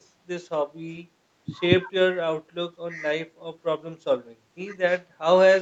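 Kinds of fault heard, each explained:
Speech suppressed in double talk: the speech dips briefly four times, at 0.93, 1.86, 2.88 and 5.11 s. Each dip lasts roughly a twentieth to a tenth of a second. The first two drop by about 15 dB, the last by about 10 dB, and the one at 2.88 s by only a few dB. The likely cause is an echo canceller that treated overlapping far-end sound as echo and attenuated the near-end talker along with it.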